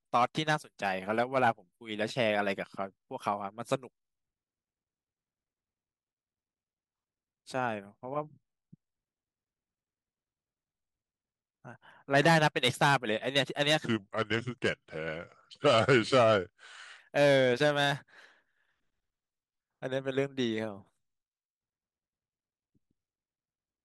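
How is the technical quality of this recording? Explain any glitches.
One glitch stands out. From 13.85 to 16.99 s, a section plays at the wrong speed. The speech runs at 0.797 times its recorded rate. Pitch falls by roughly four semitones at once. The voice turns deep and dragging. A mismatched playback or editing clock is the likely cause.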